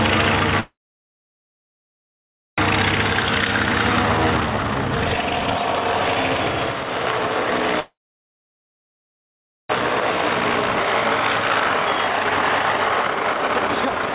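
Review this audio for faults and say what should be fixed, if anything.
Call audio freezes at 0.60–2.60 s and 7.80–9.71 s. Each is about 2 s of a fading tail, then near silence, most likely from delayed packets draining the jitter buffer.

Jitter buffer speed-ups follow at 2.73–7.74 s (137% speed) and 10.01–14.15 s (133%). Pitch periods are cut to shed the backlog, removing around 2 s and 1.5 s.

Fix the network delay spikes and let the jitter buffer catch up more gently. The band-limited G.711 sound, with nothing above 4 kHz, comes from the call path itself.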